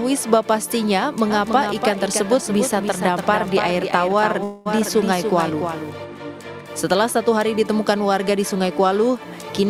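From 1.30 to 6.05 s there's a doubled audio track: a second full-band copy trails the original by roughly 300 ms at about 5 dB quieter, with no room colour, cutting in and out abruptly. It's likely a slower capture path picking the audio up again.

Inside that stretch, from 4.43 to 4.68 s, you hear a call audio freeze. The last sound smears into a fading buzz or hiss for 222 ms, then the audio resumes where it left off, with nothing lost, just later. Likely cause is delayed packets draining the jitter buffer.

Right at the end, 9.60 to 9.70 s, there's a jitter buffer speed-up. The receiver trims short pitch-period chunks, around 40 ms in total, so the audio rushes along at 139% speed without any pitch change, sounding briefly hurried.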